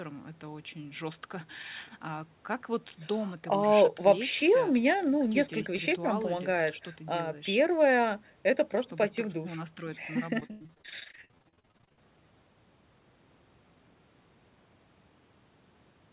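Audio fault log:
10.4–12.02 s, repeated packet loss (robotic sound): about thirty dropouts, the longest 94 ms, each patched by repeating the last sound, so nearly half the stretch is filled in and sounds choppy. The spectrogram shows smeared, repeated frames below the 4 kHz ceiling. The waveform shows abrupt, looping cycles.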